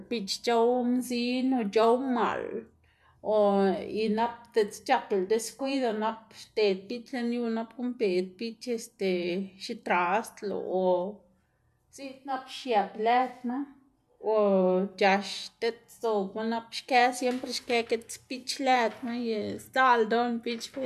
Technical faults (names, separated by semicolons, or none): none